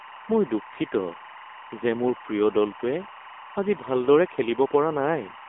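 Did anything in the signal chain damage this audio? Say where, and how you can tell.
Yes. The first fault is timecode bleed at the analogue wiring stage. Linear timecode from a neighbouring cable or track has leaked into the audio path. A steady chirping warble sits under the speech for the whole clip, well below it, perhaps 25 dB down. It alternates between pitches near 1 kHz and 2 kHz, the two frequencies of the code's square wave. Its pattern repeats at 23.976 frames per second.

The second fault is an AMR narrowband mobile codec at the codec stage. The speech was squeezed through a low-rate AMR-NB encoder, which fits its 7.95 kbps mode. The codec's 8 kHz sampling leaves nothing above 3.8 kHz, and the line band is narrowed to about 250 Hz to 3.6 kHz. The codec damage is plainly audible. The voice sounds buzzy and synthetic.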